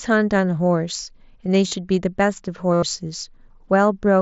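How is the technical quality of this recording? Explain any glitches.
Two dropouts break the speech, both concealed Bluetooth headset packet loss, heard over the light graininess of the mSBC headset link. At 1.68 s, roughly 38 ms of lost packets were bridged by looping the last short stretch of waveform, giving a brief buzz. At 2.73 s the gap lasts about 90 ms, a held buzzy tone ending in a small warble. On a waveform, each shows a repeating cycle at constant level. A spectrogram shows evenly spaced horizontal harmonic lines.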